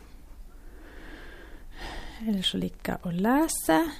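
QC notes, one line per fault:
3.66 s, lost LE Audio frames: a brief grainy smear in the speech, fitting one dropped 7.5 ms frame. The decoder filled the gap by reusing the previous spectrum with randomised signs, so you hear a short noisy blur rather than a dropout.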